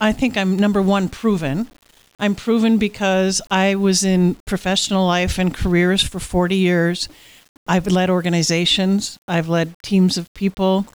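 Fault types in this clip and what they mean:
Low bit depth without dither: gritty, sound-following distortion around 35 dB down, likely 7-bit rounding; waveform shows stair-steps, spectrogram a level-tracking noise floor.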